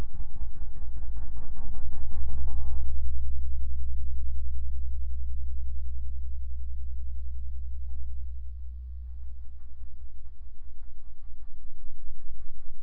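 These sounds carry sample clock jitter from start to finish. The converter's timing wobbles, so each sample lands a little early or late. The resulting error tracks how steeply the waveform is changing. Sharp, loud and bright moments pick up a faint hiss and grain. Quiet gaps stay clean. The timing spread is on the order of a few microseconds. That leaves the added noise roughly 70 dB below the sound itself, so it sits low.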